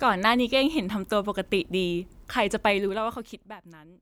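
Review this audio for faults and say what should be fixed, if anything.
From 2.66 to 3.62 s, gain fell about 20 dB in unsmoothed 2 dB steps, roughly ten a second, producing zipper noise, an audible ticking. Interpolate the gain per sample so this drop glides smoothly.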